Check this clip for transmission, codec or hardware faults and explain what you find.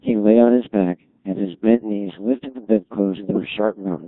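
The clip has one codec fault, present throughout.

Codec 2 vocoder, whole clip: the decoder rebuilds speech from sine waves using only pitch, voicing and envelope, consistent with roughly 1.6 kbit/s, leaving heavy robotic, buzzy distortion.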